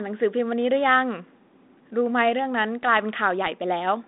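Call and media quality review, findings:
Nothing to flag on this speech clip; the G.726 leg at 32 kbit/s carries the expected 200 Hz to 3.7 kHz telephone band with only light coding texture.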